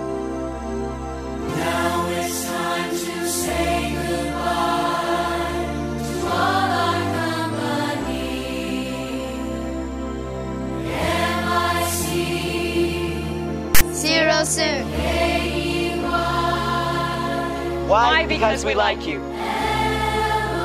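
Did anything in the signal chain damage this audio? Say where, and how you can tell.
Yes. The damage sits at the storage and playback stage: a block of file tags was played as audio, with the player reading metadata text as if it were sample data. From 13.75 s to 13.81 s, about 60 ms, a sudden burst of static cuts in with hard edges at both ends. It is a loud, harsh rasp pushed off-centre, as text bytes form a narrow, lopsided range of values that reads as a buzzy waveform with a strong offset.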